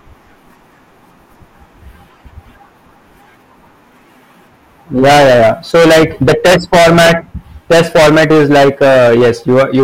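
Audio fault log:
4.97–7.13 s and 7.71 s to the end, hard clipping: the speech is driven about 19 dB past what the stage can pass, so every peak gets sliced flat. Those squared-off tops spray harmonics way up high, giving a harsh, buzzy fuzz on all the louder bits, with a short clean gap between the two runs.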